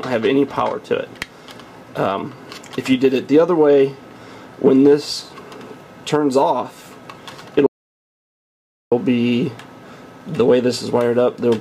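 At 7.66 s the sound cuts out dead and stays in an audio dropout to silence until 8.92 s, about 1.25 s of silence with no room tone at all. That's likely the input dropping while the recorder kept writing, so whatever happened there is gone.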